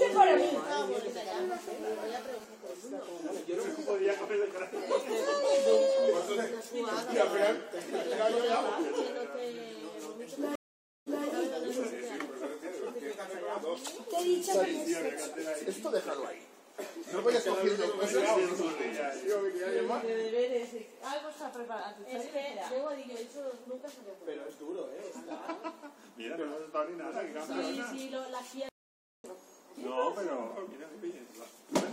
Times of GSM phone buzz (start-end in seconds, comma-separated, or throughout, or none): 1.22-2.45